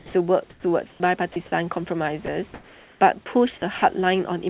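From the start to 1.36 s, and again from 2.26 to 3.26 s, the speech is chopped: quiet bits keep vanishing into a hiss, about 0.42 s and 0.5 s of sound in total. That's likely the sender's voice detector flipping on and off and filling the gaps with comfort noise. Then at 3.78 to 3.82 s there's a 40 ms sound dropped by the voice detector, likely the same mechanism, where a soft stretch was taken for background and briefly swapped for steady noise before sending resumed. It all sits on a narrowband call path with nothing above 4 kHz, and the room noise sits about 33 dB under the speech.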